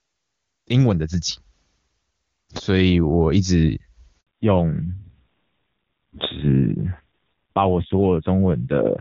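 At 4.21 s the speech cuts out in a handover gap lasting 60 ms, until 4.27 s. The call was switched between networks and no speech frames came through during the transfer, so the audio fades within milliseconds, falls silent, and that stretch is simply lost.

From 4.27 s to the end the call shows a fallback to narrowband. Before the gap, the clean wideband sound fits AMR-WB (HD Voice) at its highest rate. Afterwards it points to a low-rate AMR narrowband codec: nothing remains above 4 kHz, and the speech turns muffled and coarser.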